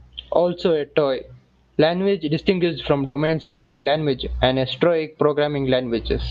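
Just after "toy language is distinguished", from 3.05 to 3.17 s, the last sound hangs on and fades for about 100 ms before the speech jumps ahead. This is a burst of packet loss: the receiver stretched out the final sound it had to cover the lost packets.

At 3.25 to 3.29 s there is a brief smear, roughly 20 ms long. This short concealed packet loss was patched by extending the preceding sound and then blending back into the real audio.

From 3.41 to 3.87 s, a held, fading tail stretches for about 440 ms. The speech then returns at "and esoteric" with that stretch missing, likely a long network dropout.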